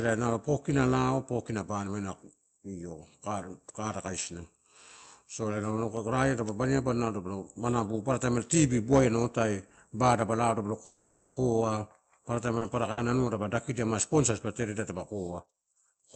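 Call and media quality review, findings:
Overlap-add ripple, whole clip. Metallic buzz on the speech with extra tones around each note, level pumping about 6 dB at around 200 Hz. Frame-based processing stage rebuilding frames with an overlap that doesn't sum flat, so gain dips and swells once per frame.

Call audio freeze, 10.85 to 11.38 s. Sound hangs and smears for about 0.51 s, then picks up where it left off with nothing lost. Likely packets held up in transit and the jitter buffer running dry, so the receiver keeps extending the last sound until the stream resumes.

Short stall from a late packet, 12.58 to 12.63 s and 12.91 to 12.99 s. Brief held sound with a slight buzz or dip, about 30 ms then about 60 ms of fill. Jitter buffer underrun: one packet misses its slot, the receiver stretches what it has, then continues from the same spot, nothing skipped.

Jitter buffer speed-up, 15.39 to 15.96 s. 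Speech sounds rushed at 108% speed, pitch unchanged. Buffer overfilled, as when delayed packets arrive together, so the receiver trims pitch-period-sized slivers back to back, around 50 ms in total, to cut the latency back down. Runs over the 8 kHz band-limited Opus path, which sounds like roughly 64 kbps.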